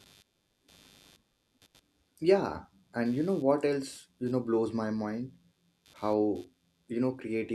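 A faint buzzing runs throughout the speech, pulsing about a hundred times a second. This is computer activity noise: processor load shifts the shared audio ground.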